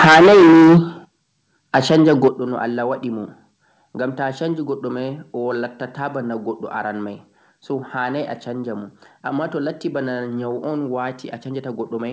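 From 0.0 to 0.78 s the speech is badly crushed, most likely microphone overload. Peaks sit about 14 dB over the converter's limit, with roughly half the samples flattened, so it crackles harshly. The level drops suddenly at 0.05 s by about 2 dB, then at 1.05 s by about 10 dB. That's the microphone volume stepped down, likely by the call software pulling the input back. A milder overload at 1.75 to 2.28 s runs about 3 dB over, with a few percent of samples clipped, and ends with another step down of about 9 dB at 2.28 s. All of it comes through a WebRTC call path with nothing above 8 kHz, which fits G.722.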